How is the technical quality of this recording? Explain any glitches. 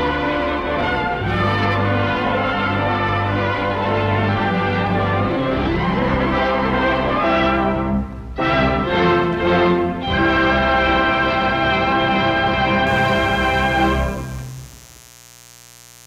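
One fault is present: mains buzz from 12.87 s to 16.07 s, when the clip ends. Sharp switching spikes, twice per 60 Hz cycle, leak in as a raspy steady buzz around 25 dB beneath the sound. On a spectrogram it shows as evenly spaced horizontal harmonic lines stacking up into the kilohertz range.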